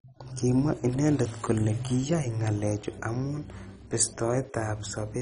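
Throughout the speech, the encoder was most likely starved of bits under MP2 compression, at a rate that fits 32 kbps, so upper sub-bands shut off entirely and nothing survives above 10.4 kHz. What remains sounds dull and coarsely quantised, with a heavy, gurgling granularity.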